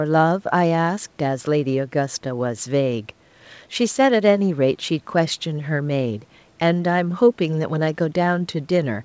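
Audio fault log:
No audio fault to log.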